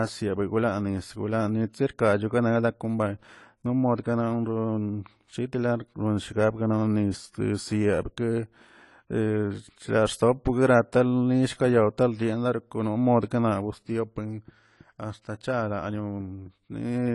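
From the first second to the end, the speech is dull and smeared, with nothing above 11.5 kHz and a fizzy, warbling texture on sibilants and held vowels. This is plainly audible AAC compression damage, likely from AAC-LC at a low bitrate, around 32 kbps. The encoder dropped the top band and coarsely quantised what remained. A simple low-pass filter would only dull the sound, but here the surviving spectrum also swirls.

At 1.73 s, a sharp onset is preceded by a brief hiss spreading about 15 ms ahead of it, and the attack itself sounds softened. This is pre-echo. The transform block containing the onset spread its quantisation noise evenly, so noise sized for the loud attack leaked into the quiet instant before it. Unlike a click or dropout, it sits only just ahead of the transient and smears into it.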